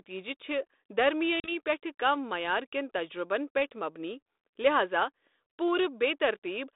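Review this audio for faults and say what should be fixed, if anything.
Packet loss on an ADPCM call at 1.40 to 1.52 s: about 40 ms (a few packets) goes silent. When sound returns, the decoder's mismatched predictor and step size leave the speech slightly distorted until it settles, unlike a plain dropout that resumes cleanly. Add packet-loss concealment that also resets or resynchronises the G.726 decoder state, and protect the 32 kbit/s narrowband stream with jitter buffering or redundancy.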